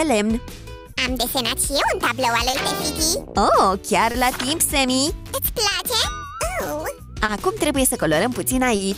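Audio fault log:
Throughout: clock drift between sender and receiver. The sender's clock runs slow by about 2 percent, so audio arrives slightly slower than it is played out and the receiver's buffer keeps draining. Nothing is skipped, but the timing catches at intervals. Unlike an isolated network hiccup, this steady rate mismatch explains why the catches keep coming back across the whole clip.
0.93–0.98, 2.50–2.55, 4.11–4.16, 5.68–5.73, 7.25–7.30, 8.76–8.81: short stall from a late packet. Each time, the sound is held about 30 ms too long with a slight buzz or dip, then carries on from exactly where it stopped. No audio is lost, but playback falls about 30 ms further behind at each stall. The stalls come roughly 1.5–1.6 s apart. A packet-loss gap would instead remove sound, replacing it with a dropout or a concealment smear.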